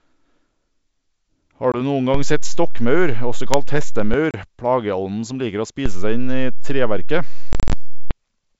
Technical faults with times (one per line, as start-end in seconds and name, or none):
1.72-1.77 packet loss on an ADPCM call
2.14-4.14 DC step
4.31-4.35 packet loss on an ADPCM call
5.86-8.11 DC step
7.53-7.73 packet loss on an ADPCM call